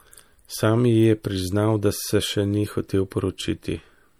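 Throughout the clip, the speech carries plainly audible MP3 compression damage. The likely cause is encoding at a low bitrate, which fits about 64 kbps. Short of bits, the encoder drops weak frequency lines frame by frame. They flicker on and off, giving a watery or swirly texture.

At 3.10 s comes a pre-echo. An attack sits late in a transform block. The noise meant for the loud part also spreads back about 13 ms into the quiet before it. A short hiss runs ahead, and the attack sounds soft or smeared.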